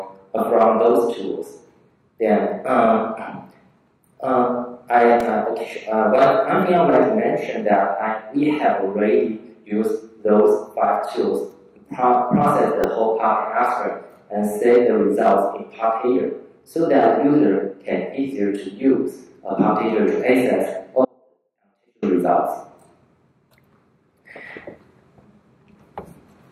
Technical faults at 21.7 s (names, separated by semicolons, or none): audio dropout to a faint residue